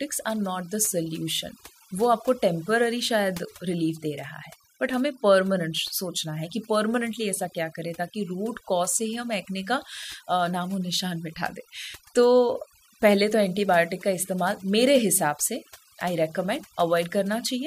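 Overdone noise removal runs through the whole clip. The noise reduction was set too strong, so frequency bands that sit close to its noise estimate are pushed far down or cut, taking quieter parts of the speech with them and leaving the background broken into twinkling, warbling specks.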